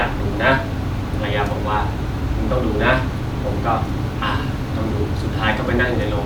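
No technical faults can be heard anywhere in this speech recording. There is no moment in the audio that calls for a timestamp or an account of something going wrong.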